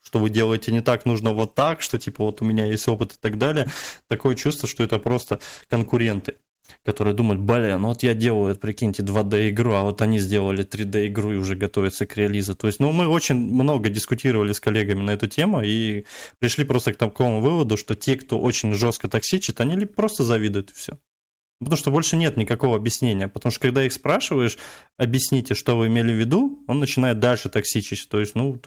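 Speech, with two call bitrate drops: from 1.25 to 7.17 s, after "вы делаете не так" and before "думают блин ну вот", and from 17.81 to 19.65 s, after "просто к такому выводу" and before "просто завидуют и все". In both the sound turns coarse, watery and dull, consistent with the encoder falling from about 32 kbps to roughly 13–14 kbps. Unlike packet loss, nothing drops out or glitches; quality stays degraded and then recovers.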